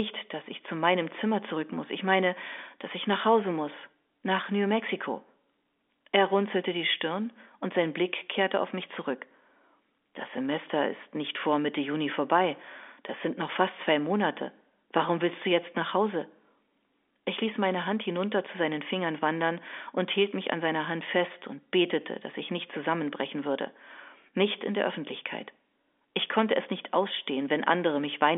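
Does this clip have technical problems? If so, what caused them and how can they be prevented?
No, the speech carries through G.711 telephone coding as a normal phone call does, confined to the line's roughly 250 Hz to 3.6 kHz band, with no faults to address.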